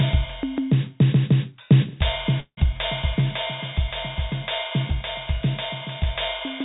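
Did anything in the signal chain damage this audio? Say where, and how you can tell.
Yes: a call audio freeze at the jitter buffer, likely from late packets. At 2.4 to 2.6 s the music smears, falls silent, then resumes 171 ms late, nothing lost.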